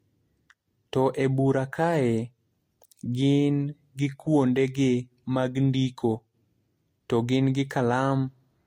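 Transcoding between lossy codecs runs throughout this speech clip: nothing above 16.7 kHz survives, and the different codecs' artefacts are heard together, likely from Vorbis-to-MP3 re-encoding at low bitrates.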